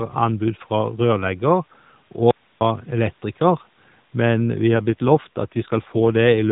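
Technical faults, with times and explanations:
2.31 to 2.61 s: audio dropout to a faint residue. The speech cuts out abruptly for about 0.3 s, and what's left in the gap is just hiss, sitting roughly 40 dB below the signal. That hiss tells you the path after the break stayed live while the wanted audio went missing, likely a brief loss upstream rather than a mute. It snaps out and back in mid-flow, so it doesn't read as a natural pause or a fade.
4.74 to 6.51 s: AMR rate drop. Through the final stretch the voice turns rougher and more synthetic, which fits the AMR-NB codec stepping down from 12.2 kbps to 5.9 kbps, the sort of switch a network makes on a weak radio link to spend bits on error protection instead. There's no gap and the band doesn't change, since everything was already capped below 4 kHz by the narrowband codec. The speech just gets buzzier until the clip ends.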